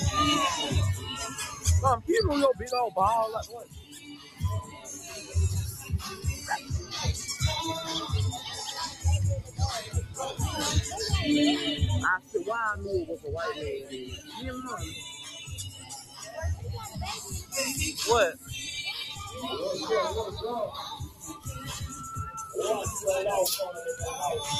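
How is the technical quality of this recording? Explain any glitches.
The quality's compromised by a speech-style noise suppressor that's been left running on material it wasn't built for. That's the noise suppressor applied to music or sounds problem, and it's present the whole way through. The suppressor keeps mistaking sustained, steady parts of the sound for background noise and pulling them down, so the level swings by something like 10 dB. Sharp onsets mostly punch through, while anything held or decaying sinks underneath, so you get a pumping, slightly hollow feel instead of a stable level.

On top of that there are distinct spots where sound is cut by the noise suppressor: 1.55–2.08 s (down about 10 dB), 3.54–6.92 s (about 13 dB), 8.9–10.18 s (about 11 dB), 12.19–12.34 s (about 13 dB), 13.8–17.53 s (about 12 dB), 18.33–18.52 s (about 8 dB), 19.2–19.38 s (about 6 dB) and 21.01–22.04 s (about 13 dB). 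In each one, the suppressor decided a steady or fading stretch was noise and clamped it harder than its surroundings, so tails get chopped short and sustained portions briefly duck out. The longer windows around 3.5–7 s and 13.8–17.5 s carry well over a second of gouged sound each.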